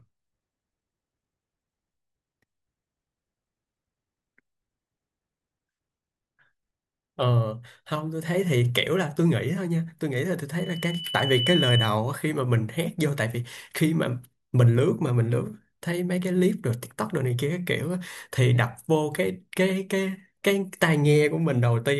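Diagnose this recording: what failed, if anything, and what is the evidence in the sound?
A loudspeaker feedback squeal, in the analogue acoustic path between microphone and loudspeaker, runs from 10.58 to 11.96 s. A single 3 kHz tone swells over roughly a second until it sits about 5 dB above the speech. The microphone was hearing its own loudspeaker, and at 3 kHz the loop gain passed unity, so that frequency fed on itself. The gradual build at one pitch separates it from a steady electrical whine or interference tone, which starts at full level.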